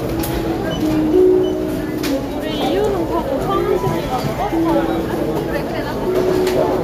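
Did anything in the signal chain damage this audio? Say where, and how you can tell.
Yes. GSM phone buzz gets into the analogue wiring from 2.51 s to 4.33 s. A hard, raspy buzz sits on top of the sound at about 12 dB below it. Its fundamental is 217 Hz, with a dense stack of harmonics above. It ignores the sound entirely. A nearby 2G handset transmitting in bursts during a data transfer induces radio pulses in the cable, and an input stage rectifies them into audio.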